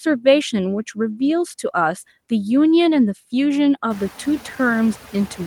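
Noise suppressor artifacts run through the whole clip. The suppressor cuts steady background noise by about 10 dB, so it dips between words and returns under speech. Near 4 s, room noise rises by about 25 dB, sitting about 17 dB below the speech.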